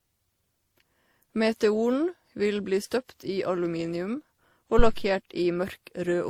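Throughout the speech, layered compression artefacts overlap, with content reaching up to about 20.2 kHz, which points to transcoding between lossy codecs, likely an MP3, then WMA, then Opus chain. From 4.79 to 5.03 s a phantom power thump occurs: a supply switched on or off on the live input sends a deep thump through the coupling capacitors, decaying over about 53 ms.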